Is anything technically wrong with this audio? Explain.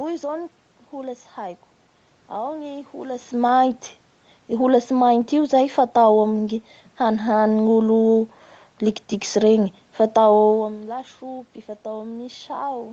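No, nothing technically wrong can be heard here.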